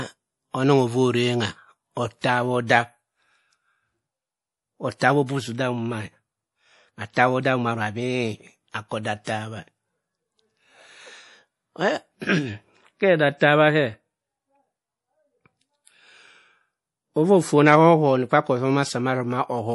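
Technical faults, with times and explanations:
Throughout, MP3 compression: the damage is plainly audible, with nothing above 11.5 kHz and a watery, swirly texture on the speech, especially on s sounds. That's likely an MP3 encoder starved for bits, which fits a bitrate somewhere around 48 kbps. It chops the treble off at a fixed point and zeroes out weaker frequency lines, and those lines flicker on and off from frame to frame, so the top end sounds dull and bubbly.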